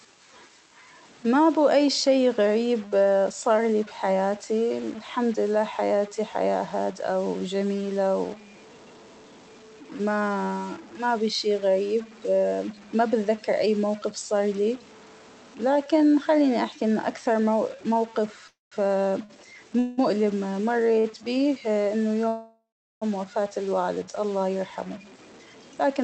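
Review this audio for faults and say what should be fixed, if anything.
Through the whole speech clip there's a distortion on the speech and a hiss filling the pauses. That's most likely a stuck bit, where one data bit sits fixed at 0 or 1 and pushes about half the samples off by that bit's weight. To prevent it, check the converter and the data lines or cabling feeding it.

There are three call audio freezes, at 18.47–18.74 s, 19.79–20.00 s and 22.28–23.04 s. Each time the last sound trails off as a fading buzz while the jitter buffer sits empty, then the speech picks up exactly where it stopped. That suggests late packets are the likely cause. The first adds about 0.24 s with roughly 0.18 s of near-silence, the second about 0.19 s with no silent stretch, and the third about 0.73 s with around 0.39 s gone quiet. To prevent them, look at network delay and jitter on that link, and give the jitter buffer a bit more headroom.

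Two short stalls from a late packet show up at 19.25–19.31 s and 21.00–21.06 s. In each, a sound is held roughly 45 ms too long with a slight buzz or dip while the receiver waits, and nothing is actually lost. To prevent them, smooth out jitter on the network path.

From 24.33 s to 26.02 s a jitter buffer speed-up kicks in. Speech runs at about 110% with the pitch unchanged, because tiny pitch-period slices, around 0.2 s in total, are trimmed to drain the backlog, so it sounds hurried. To prevent it, stop the packet bunching that builds up that excess delay.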